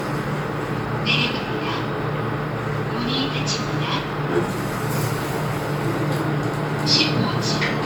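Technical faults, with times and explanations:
Throughout, generation loss: swirly, hollow, smeared sound with blurred attacks, likely from about ten MP3 passes near 128 kbit/s; spectrogram shows accumulating holes and nothing above 19.9 kHz.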